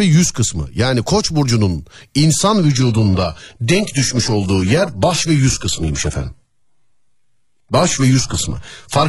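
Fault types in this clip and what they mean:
Adaptive stream at a lower bitrate: at 2.72 s quality drops abruptly, leaving nothing above 11.5 kHz and more codec artefacts, with no silent gap, unlike a dropout.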